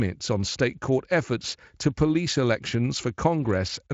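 Nothing in this speech clip stood out as a technical problem on listening.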